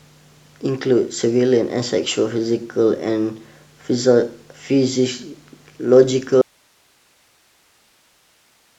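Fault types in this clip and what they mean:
Audio dropout to a faint residue: speech cuts off abruptly at 6.42 s, leaving only hiss about 40 dB down to the end. Unlike a fade, it is likely a lost signal on a still-live path.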